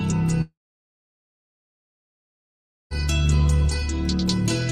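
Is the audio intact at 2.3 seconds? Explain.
No. A long network dropout runs from 0.41 to 2.93 s, so 2.3 s falls inside it. This is likely a stretch of about 2.5 s of audio that never arrived. The receiver briefly extends the last sound as a fading buzz, then leaves silence until the sound resumes, without the lost part.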